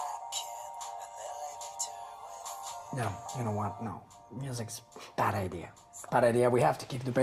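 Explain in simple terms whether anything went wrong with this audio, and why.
Nothing went wrong with this audio that a listener could pick out. There are no dropouts, glitches or sudden changes anywhere in the sound.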